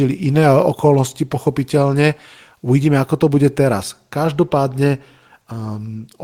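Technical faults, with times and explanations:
No technical faults can be heard in this speech clip. Nothing in the audio calls for a time or an explanation.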